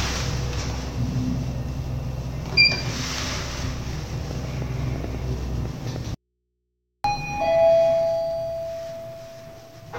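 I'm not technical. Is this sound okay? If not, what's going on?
No. There are two problems, both in the later part.

From 4.31 to 5.97 s there is a train of clicks: about ten sharp ticks, roughly five per second but unevenly spaced, each standing out clearly above the sound itself. They all have much the same shape, which points to something injecting pulses into the signal path, likely electrical interference from nearby equipment or a faulty connection or power supply.

Shortly after, from 6.15 to 7.04 s, there is an audio dropout to a faint residue. For about 0.9 s the sound cuts out abruptly and only a low mains hum remains, far quieter than the normal level. The hum suggests that the recording path after the break stayed live while the actual signal was lost.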